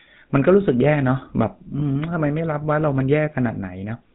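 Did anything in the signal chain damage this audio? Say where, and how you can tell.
Yes, at the codec stage. The whole clip has a buzzy, gravelly roughness, and nothing reaches above 4 kHz. That sound is the GSM full-rate codec, and the damage is plainly audible. The coder models the vocal tract and drives it with regularly spaced pulses. It keeps only every third excitation sample. This coarse excitation is what makes the speech grainy, which fits a 13 kbit/s GSM coder.

A second fault comes from the network. From 1.80 to 1.83 s, the speech briefly turns into a rough, metallic ring. These are lost GSM frames. When a frame arrives bad, the decoder reuses the settings of the last good frame. That holds the sound in place instead of letting it move on. The short span points to a single lost 20 ms frame.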